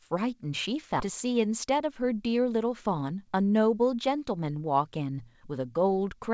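At 1.00 to 1.02 s there is a skip ahead: roughly 0.4 s of speech is missing, with no fill, so playback jumps forward and the sounds on either side of the gap are spliced almost directly. A stretch of audio was dropped while later audio was already waiting.

From 3.02 to 3.39 s, a jitter buffer speed-up plays the speech at 110% speed at unchanged pitch. Short pitch-period segments, about 40 ms in total, are cut to drain excess buffered delay, and the speech sounds briefly hurried.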